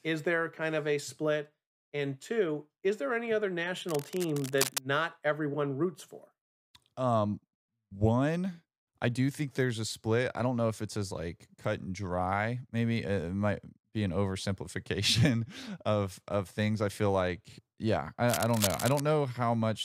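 A worn cable, connector or control being moved is the likely cause here: its contact resistance jumps around, injecting dense, ragged bursts of noise into the speech path. This cable scratch noise first appears from 3.85 to 4.88 s, a scratchy rustle sitting roughly 10 dB below the speech. It returns from 18.28 to 19.00 s, louder at around 5 dB below the speech, so the crackle intrudes more noticeably on the voice.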